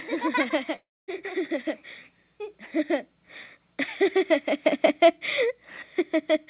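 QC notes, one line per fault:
0.76–1.10 s, long network dropout: audio likely stopped arriving at the receiver, leaving a gap of about 320 ms. Concealment stretches the last sound into a fading buzz, then about 240 ms of near-silence follows before the band-limited audio resumes past the lost part.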